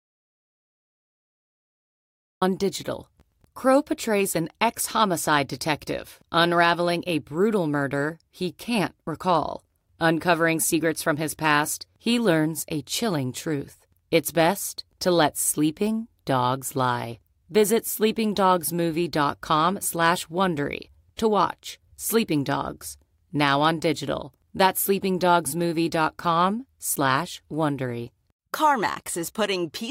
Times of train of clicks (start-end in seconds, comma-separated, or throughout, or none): none